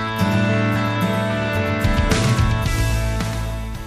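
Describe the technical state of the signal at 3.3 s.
A doubled audio track is present at 3.3 s, as it is across the whole clip. A second full-band copy of the sound trails the original by roughly 150 ms at about 5 dB lower, most likely because the signal was captured again through a slower path or an edit left two copies out of step. The copy carries no decay or room colour, so it sounds like a flat, slapback repeat.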